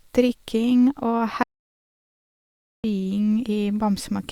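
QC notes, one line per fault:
1.43 to 2.84 s, audio dropout to silence: the speech cuts off mid-flow and returns about 1.4 s later, with the gap in between dead digital silence and no room tone, likely because the input was lost while recording continued, so that stretch of speech is gone.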